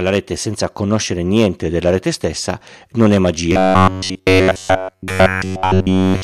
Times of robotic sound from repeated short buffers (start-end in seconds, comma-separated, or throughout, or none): 3.52-6.23